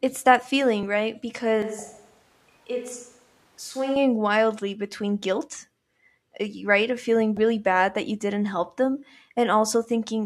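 At 0.83 s a repeated buffer produces a brief click: a 1.45 ms piece, which fits a 64-sample buffer, plays twice because new audio arrived late. From 1.62 s to 3.96 s, ending just before "wildly between guilt", the speech turns roomy and hollow, about 5 dB quieter, with background noise about 30 dB below the speech, and the change in and out is abrupt, likely a switch to a distant microphone. At 7.37 s, between "uh right of feeling" and "bad that you didn't", the same 1.45 ms repeated buffer clicks again.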